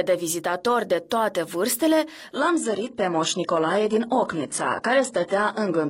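From 2.34 s to the end, the adaptive stream drops to a lower bitrate. Quality changes abruptly with no gap: nothing remains above 10.9 kHz and the treble drops, which fits a switch from 96 kbit/s AAC to 12 kbit/s HE-AAC. Packet loss would instead leave dropouts.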